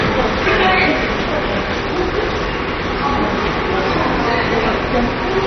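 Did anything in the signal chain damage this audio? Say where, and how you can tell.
Yes. Throughout, the sound is dull and muffled with a gurgling, granular texture, and nothing reaches above 6.1 kHz. At the codec stage, this likely points to MP2 compression at a very low rate, around 32 kbps, starving upper sub-bands until they shut off and coarsely quantising the rest.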